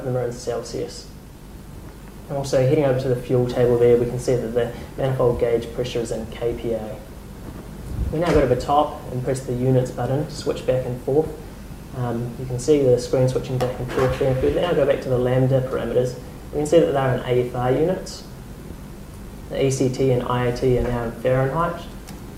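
No technical faults are audible.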